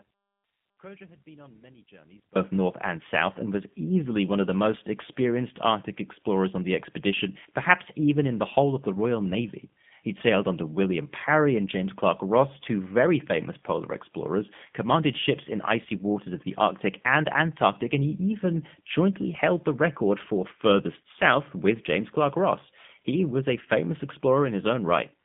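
From the first moment until 2.36 s the clip is in an audio dropout to a faint residue: only a weak leak of the signal, roughly 30 dB down, is heard. The signal then snaps back just before "north and south and". The likely cause is the wanted signal being lost upstream while the path stayed live. The waveform shows a thin trace that jumps abruptly to full level.

Throughout, the speech carries plainly audible G.729 codec damage at 8 kbit/s. It sounds rough and slightly synthetic, because the voice is rebuilt from a filter model and sparse pulses rather than sent as a waveform. The band runs from about 150 Hz to 3.5 kHz, so a spectrogram shows a hard ceiling with nothing above 3.6 kHz.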